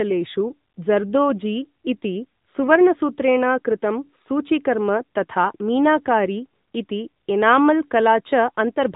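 A speech recording passed through the AMR narrowband mobile codec for its whole length. Nothing above 3.8 kHz survives, and the plainly audible coding damage, a synthetic, vocal-tract-model texture fitting a mid-rate mode near 10 kbps, separates it from a simple telephone-band filter, which would only dull the sound.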